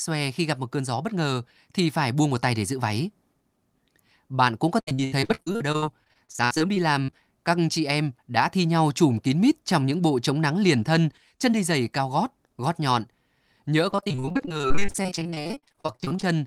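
The clip is speech with two stretches of repeated packet loss, heard as robotic sound. The first runs from 4.79 to 7.14 s. The second runs from 13.90 to 16.24 s. In each stretch, audio data went missing again and again. Each hole was patched by stretching the last bit of sound. So the speech turns choppy, with pieces missing. The first stretch has longer holes, up to 77 ms, and about a third of it is patched. The second has shorter but denser holes, up to 42 ms, and about 43 percent is patched. Inside that second stretch, at 14.08 s, there is a single sharp click. This is most likely dropped samples. Roughly one sample went missing, so the waveform jumps straight to a later value. Too little is lost to remove any sound, but the sudden step is heard as a click.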